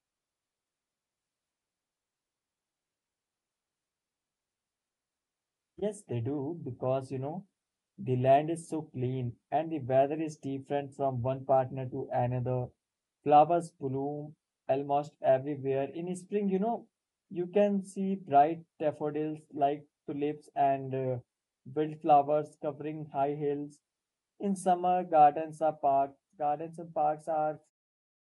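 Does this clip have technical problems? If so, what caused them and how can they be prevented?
No, the speech signal shows no technical faults, and the level eases down at the very end in a smooth fade-out, from roughly 27.5 s to 27.71 s, with no click or hard edge.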